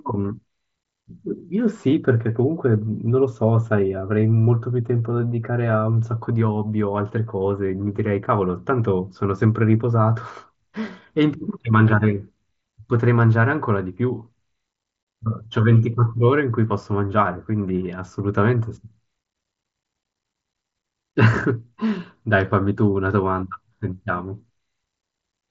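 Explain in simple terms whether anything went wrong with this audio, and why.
Nothing went wrong with this recording. It passed through a Bluetooth headset link using the mSBC codec, which keeps the sound to a somewhat narrower range than a full-quality recording and adds only a light graininess on louder moments.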